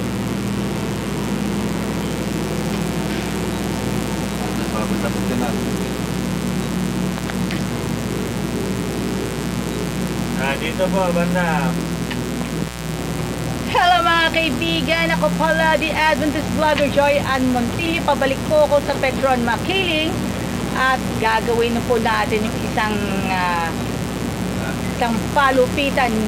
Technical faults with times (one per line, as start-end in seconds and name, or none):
0.00-26.27 mains buzz